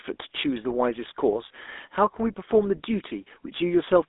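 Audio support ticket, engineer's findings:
Buzzy, gravelly roughness on the speech throughout, plainly audible. Band limited to roughly 250 Hz to 3.6 kHz. Probable component: GSM full-rate codec, consistent with 13 kbps. Pulse-driven vocal-tract model, coarsely sampled excitation, nothing passed above 4 kHz.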